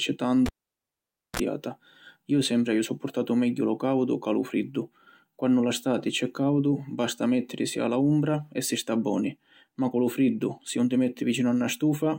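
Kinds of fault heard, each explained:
Cable pulled and plugged in: a live connector in the speech signal chain was pulled out and pushed back in while running, so the path broke and then remade contact. At 0.46 s a pop marks the break, followed by about 885 ms of near silence. As the plug goes back in, the tip touches alone for about 34 ms and picks up a 60 Hz mains buzz, then a second pop brings the sound back at 1.4 s.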